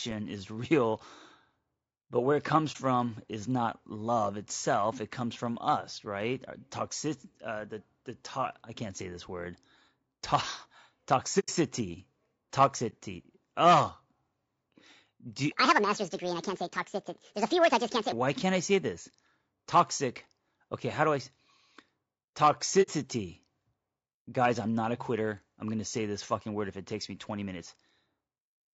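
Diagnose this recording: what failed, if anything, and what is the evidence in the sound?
Low-delay AAC compression, throughout the clip: the speech is plainly rough and grainy, with noise filling the gaps between harmonics and a thin, synthetic top band. This is codec-stage damage that likely comes from AAC-ELD running near 32 kbps, whose short frames resolve pitch harmonics poorly.

AAC frame loss with muting, at 2.72 to 2.77 s (30 ms), 11.39 to 11.49 s (90 ms), 12.89 to 12.94 s (30 ms) and 22.82 to 22.89 s (60 ms): the sound dips briefly at the single-frame losses and drops into soft-edged holes at the longer ones. Whole frames went missing, and the decoder zeroed them, with overlapping windows fading out and back in.

Section at the wrong speed, 15.52 to 18.12 s: the speech runs 1.62 times fast and sits about seven semitones higher, with pitch and tempo shifting together. The cause is likely a playback or editing stage that resampled this stretch against the wrong clock.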